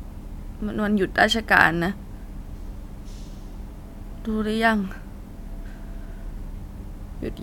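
No technical faults are audible anywhere in the recording.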